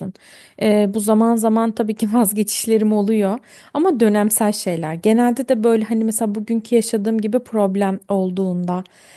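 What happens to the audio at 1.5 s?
Nothing goes wrong at 1.5 s: the speech runs on intact there, with no dropout, click, distortion or other fault at that moment.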